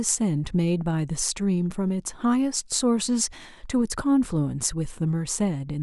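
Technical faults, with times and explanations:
No technical faults are present in the recording, so there are no times or explanations to list.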